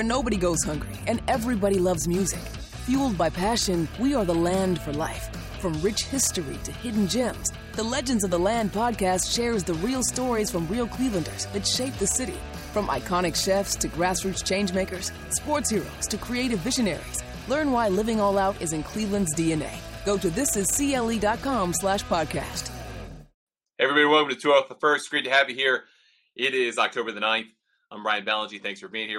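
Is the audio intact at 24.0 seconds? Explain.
Yes, at 24.0 seconds the audio runs on without any dropout, glitch or other fault.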